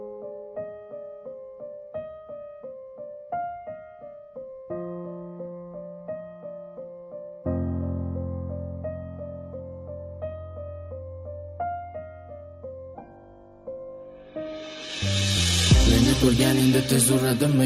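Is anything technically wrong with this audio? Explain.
Yes. From 13.89 to 15.89 s, the adaptive stream drops to a lower bitrate for two seconds. The player seems to switch to a cheaper version of the stream when the connection slows, then switches back. The sound fits a step down from about 96 kbit/s AAC to a 16 kbit/s HE-AAC stream. Nothing above 12.3 kHz survives, so the treble goes dull and codec artefacts rise. The change is abrupt, with no gap.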